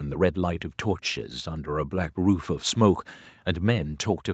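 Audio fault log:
Nothing to log here, since the speech sounds just as expected after the call's microphone processing and its Opus path at 40 kbps, which together keep everything below 8 kHz as usual.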